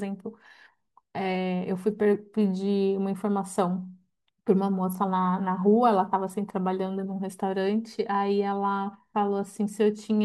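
No technical faults can be heard anywhere in the recording, and the signal holds steady throughout with nothing that points to a problem in capture, processing or transmission.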